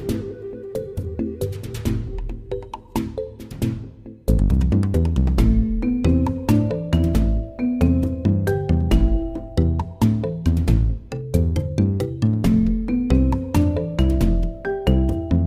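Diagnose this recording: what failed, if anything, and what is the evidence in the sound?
Nothing stood out on listening that would point to a failure at any stage of the chain.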